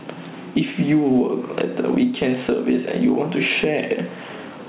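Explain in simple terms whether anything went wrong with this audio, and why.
Gain pumping runs through the whole speech clip. The level keeps breathing. That's likely from the mic gain being cranked too high, with a fast limiter hauling it back down. The sound ends up squashed and flat, and the phone-line call path trims everything above 4 kHz.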